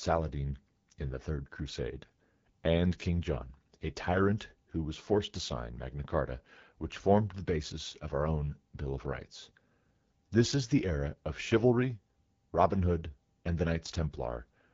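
Throughout the clip the speech sounds rough and raspy, with a noisy top end. This is AMR wideband (HD Voice) codec damage at a very low rate, which fits 8.85 kbit/s, too little for the codec's pulse-driven model to shape the voice cleanly.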